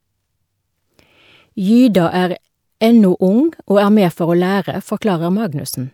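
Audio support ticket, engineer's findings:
Generation loss, throughout. Swirly, hollow, smeared speech with blurred consonant onsets, worse than a single MP3 pass at around 128 kbit/s would give. Likely repeated lossy re-encoding, about three passes, each requantising on a shifted frame grid and compounding noise and spectral holes.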